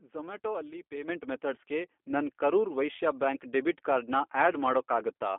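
Speech with plainly audible G.729 codec damage throughout. It is band-limited to 250 Hz–3.5 kHz, with a rough, synthetic buzz that plain filtering lacks, consistent with 8 kbit/s G.729A.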